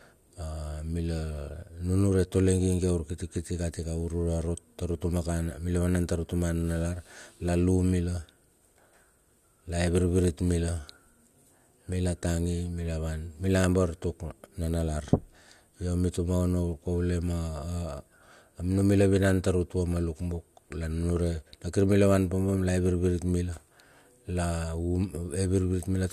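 No technical faults are audible.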